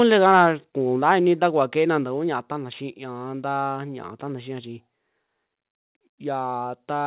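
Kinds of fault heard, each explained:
Microphone overload: The loudest peaks flatten with a harsh crackle, from 0.26 to 0.46 s and again near 1.1 s, likely from input gain set too high.
Microphone volume stepped down: The level drops suddenly by about 3 dB at 1.02 s and again at 2.04 s, likely automatic gain control reacting to overload.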